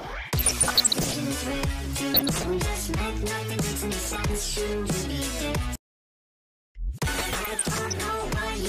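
DAB burbling at 0.38 to 1.14 s, 2.14 to 2.47 s, 3.99 to 4.23 s and 7.18 to 7.93 s. Bit errors slipping past error correction make individual MP2 sub-bands jump in level, producing bubbling blips of noise over the sound.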